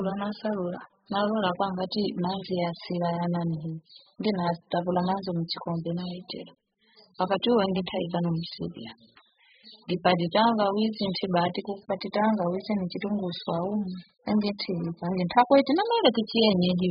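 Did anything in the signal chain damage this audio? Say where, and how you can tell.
Yes, at the codec stage. Throughout, the speech has nothing above 5 kHz and sounds dull, smeared and warbly, which points to heavy, very low-bitrate compression, likely AAC.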